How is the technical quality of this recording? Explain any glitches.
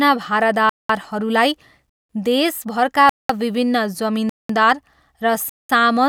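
The recording is repeatedly interrupted by a gap between chunks: 200 ms holes of silence begin at 0.69, 1.89, 3.09, 4.29 and 5.49 s. The speech arrives in 1-second chunks with silence inserted at each join, so nothing is lost, but the flow breaks every 1.2 s. On a waveform each hole is a flat line with abrupt edges, and on a spectrogram it is a blank vertical strip across all frequencies.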